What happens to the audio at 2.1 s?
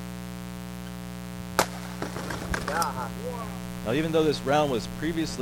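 At 2.1 s the mains buzz that runs through the whole clip is present, sitting only around 10 dB below the wanted sound. Sharp switching spikes, of the kind a dimmer or rectifier produces, arrive twice in each 60 Hz cycle and spread harmonics up into the kilohertz range, giving a steady, raspy, edgy tone. A plain mains hum would instead be a smooth, low 60 or 120 Hz drone without that bright, gritty upper content.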